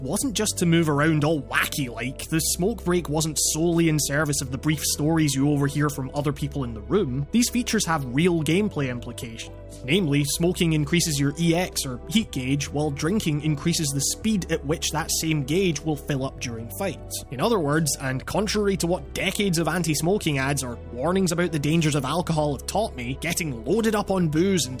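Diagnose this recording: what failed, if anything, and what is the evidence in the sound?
No failure at any stage of the chain, with no dropout, click, distortion or timing fault audible anywhere in the recording.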